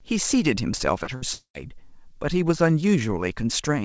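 Speech carried over a call path with nothing above 8 kHz, which fits a wideband codec such as G.722. Short concealed packet loss occurs at 0.77–0.83 s and 1.04–1.10 s: each time about 30 ms of audio never arrived and was bridged with extrapolated sound, heard as a brief smear. A burst of packet loss at 1.16–1.24 s replaces about 60 ms with a continuation that fades before the audio resumes further on. From 1.33 to 1.57 s the sound stretches into a decaying continuation for about 0.2 s, then falls to 90 ms of silence, with about 210 ms of material missing. This is likely a long network dropout.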